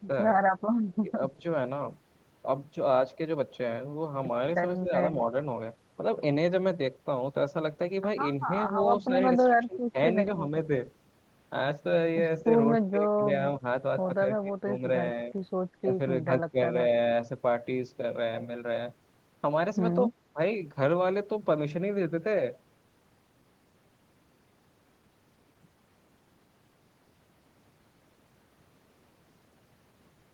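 From 0.58 to 0.96 s there is an echo leak: a faint delayed copy of the speech, roughly 40 dB down, trails it by about 205 ms. Likely the far end's echo canceller left a residue of its loudspeaker pickup and sent it back.

Speech suppressed in double talk follows at 1.03–1.44 s, 4.8–5.33 s, 9.07–10.51 s, 12.43–13.63 s, 14.41–15.93 s, 16.51–16.58 s and 20.1–20.39 s. The voice dips in short pieces, by about 5 and 10 dB in the first two, then by around 20 dB. This is likely an echo canceller ducking the talker during overlap.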